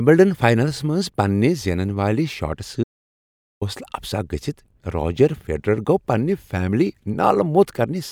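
An audio dropout to silence runs from 2.84 to 3.61 s: the speech cuts off mid-flow and about 0.78 s is silence, with no room tone, before sound returns. The input was likely lost briefly while recording continued writing silence.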